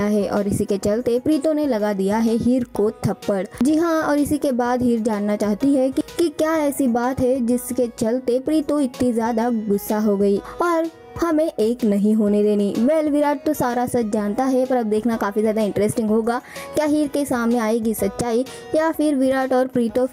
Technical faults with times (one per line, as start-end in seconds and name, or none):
0.00-20.13 gain pumping